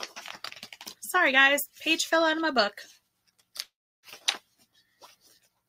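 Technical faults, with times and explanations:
3.63–4.06 s, long network dropout: the sound breaks off and the last moment is stretched into a brief buzzing or hissing tail that fades out, leaving about 0.32 s of near-silence before the audio resumes at 4.06 s. About 0.4 s of material is simply gone, so the return jumps ahead rather than continuing. This is likely packets failing to arrive, with the receiver's concealment repeating the last audio until it gives up.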